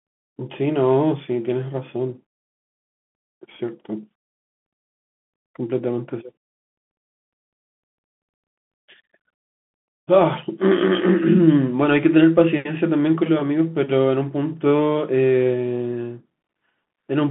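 Throughout the speech, the sound carries the marks of a Bluetooth CVSD headset codec. The line is narrowband, roughly 150 Hz to 3.4 kHz, with nothing above 3.8 kHz. A simple telephone band-limit would sound clean inside that range, but here the one-bit delta coding, consistent with a 64 kbps stream, leaves a granular hiss under the speech. S sounds turn scratchy where the adaptive step cannot keep pace with them.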